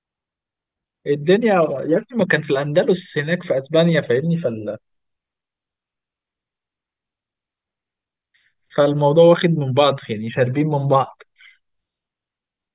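No technical faults are audible in this speech recording.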